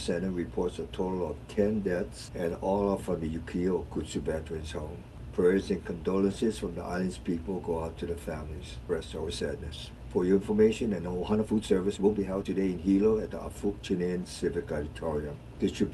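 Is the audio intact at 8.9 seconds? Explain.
No. At about 8.89 to 8.91 s there is a skip ahead. Roughly a second and a half of audio was dropped, in transit or by an overflowing jitter buffer. Playback jumps forward with no gap, and the two sides are joined directly.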